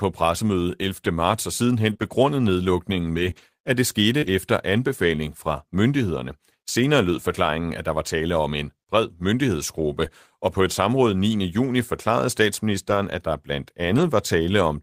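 Between 1.89 and 4.28 s, scattered short gaps: about five lost or late packets, the longest around 30 ms, patched by extending prior sound, leaving brief ticks and smears.

Lost packets rebuilt from error correction follow at 10.00–10.06 s before "og på et", 10.94–10.96 s after "og på et", 12.90–12.96 s before "at der blandt", and 13.84–14.06 s. Low-bitrate backup copies fill each gap, so the audio sounds rougher and noisier rather than silent.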